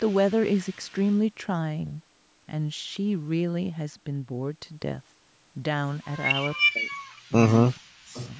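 From 0.08 to 1.16 s a faint delayed copy of the speech trails about 0.4 s behind, roughly 35 dB down. This is echo leak, likely from a loudspeaker on the far end whose echo canceller let some of its microphone pickup return. The echo comes back louder, about 25 dB down with a delay near 0.44 s, from 6.5 to 6.61 s and from 7.16 to 7.78 s. From 6.63 to 6.96 s the speech itself sinks by up to about 35 dB, with a brief dip of about 20 dB from 7.28 to 7.33 s and a deeper loss of about 40 dB from 7.75 to 8.15 s. This is speech suppressed in double talk, likely because the canceller could not separate the talker from the echo and turned both down. Echo leak returns from 8.14 s to the end, now only about 20 dB down and delayed by roughly 0.45 s.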